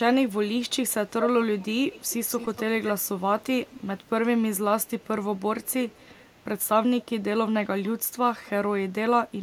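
Echo leak at 1.24, 1.93, 2.85, 3.69, 4.83, 5.35, 5.63 and 5.89 s: a delayed copy trails the speech by 228 ms, later 262 ms. It fades from fairly loud to barely audible, and a spectrogram shows duplicated harmonic traces offset behind the speech. The likely cause is a loudspeaker echo canceller passing residue.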